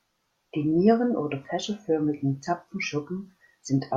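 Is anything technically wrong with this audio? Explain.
Yes. At about 3.67 s, near the end of the speech, compressed frames are skipped. About one frame of the encoded stream never reaches the output, either because it is missing or because the decoder rejected it as corrupt. Playback jumps ahead by around 30 ms, which fits a frame length of 26.1 ms. Adjacent frames overlap, so the join sounds like a short smeared blip with a small time jump. A sample-level dropout would give a sharp click or a gap of silence instead.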